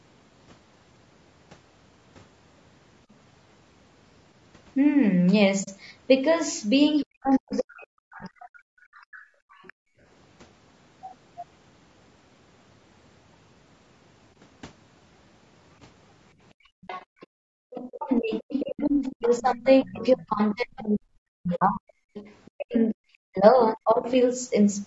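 Throughout the clip the speech sounds rough and grainy, with a hiss-like fill between the harmonics and a thin, slightly synthetic top end. This is plainly audible and is likely low-delay AAC compression, the AAC-ELD style of codec used for video calls, running at a low bitrate around 32 kbps. At this bitrate the bits run out, so the detail between harmonics turns to noise. The audio stops at about 8 kHz, which is ordinary call microphone processing.

At 5.63 s the sound fades out and back in across a soft-edged hole of about 40 ms. This is AAC frame loss with muting. The decoder zeroed the spectrum of the missing frames, and the overlapping windows smoothed the edges into a fade rather than a hard cut. The same fault returns at 17.23 s as a longer gap of about 100 ms, and again at 21.55 s for about 60 ms.

From 7.01 to 7.56 s a faint second voice sits far beneath the speech, about 35 dB down. 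It is likely the other side's voice leaking through: the far end plays on a loudspeaker and the echo canceller leaves residue in the microphone. It recurs from 8.94 to 9.73 s at about 30 dB down, from 16.83 to 19.91 s more clearly at about 20 dB down, and from 22.14 to 22.51 s, again about 20 dB down.

Starting at 7.02 s and lasting about 2 s, to 9.02 s, the main speech dips, dulls and breaks into pieces, at worst by roughly 40 dB. This is likely speech suppressed in double talk: with both sides talking at once, the echo canceller could not tell its own talker from the loudspeaker echo and turned everything down. A much longer stretch runs from 17.89 to 24.06 s, about 5 s in total.

From 9.3 to 10.01 s the room sound drops away, by as much as about 34 dB, for roughly half a second, then returns. This is background gated by the echo canceller, which clamped the microphone down hard while the loudspeaker was playing and released it afterwards. 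It happens again from 16.54 to 17.61 s, for roughly 0.7 s at the same depth.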